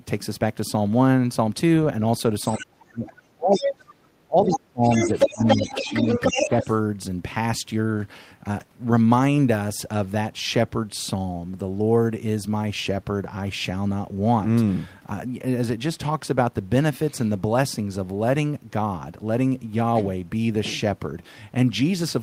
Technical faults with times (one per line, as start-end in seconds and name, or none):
2.48-2.63 other side's voice leaking through
2.57-3.91 speech suppressed in double talk
3.51-3.72 other side's voice leaking through
4.27-6.02 speech suppressed in double talk
4.45-4.58 other side's voice leaking through
4.85-6.76 other side's voice leaking through
6.33-6.67 speech suppressed in double talk